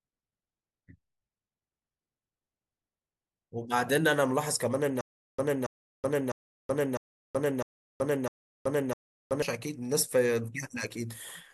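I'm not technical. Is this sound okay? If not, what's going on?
No. Stutter with silent gaps runs from 5.01 to 9.42 s: a 0.28-second scrap of speech repeats six times, each followed by 0.38 seconds of dead silence. The playback likely stalled and replayed its last fragment at each retry, so the speech from that stretch is missing.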